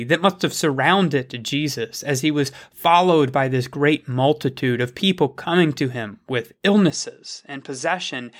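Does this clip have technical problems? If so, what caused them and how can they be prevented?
Yes. Right after "coming to him with", at 6.9 s, the speech suddenly loses everything above 10.5 kHz, drops about 5 dB and gains a faint new background noise, with no gap. The likely cause is an input switched to a poorer device. Unlike a filter or gain change, tone, level and noise floor all shift together at one instant. To prevent it, lock the recording input to one device.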